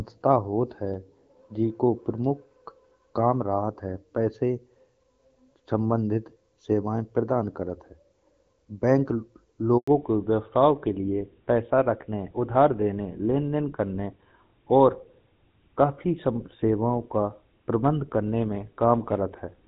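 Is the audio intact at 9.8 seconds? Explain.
No. A handover gap runs from 9.78 to 9.88 s: the call switched networks and no speech frames arrived for 100 ms. The sound falls away within a few tens of milliseconds and stays silent until the new link carries audio again.

At 9.88 s a fallback to narrowband follows. The call left the HD Voice path, whose clear wideband sound before the gap fits AMR-WB at 12.65 kbit/s, for an older narrowband codec, likely GSM full rate. Nothing above 4 kHz remains, so the sound turns duller and rougher from there to the end.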